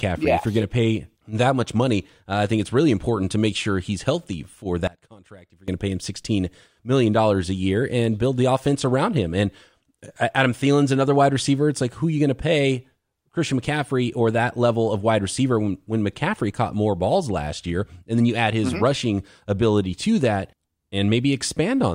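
Right after "sure he's healthy for", from 4.87 to 5.68 s, the speech drops by about 23 dB to a faint ghost, likely one channel inverted, cancelling in mono.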